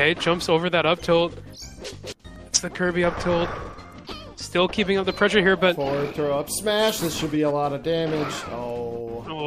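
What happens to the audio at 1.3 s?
Nothing goes wrong at 1.3 s; the audio plays through that moment intact, with no dropout, click or other audible fault.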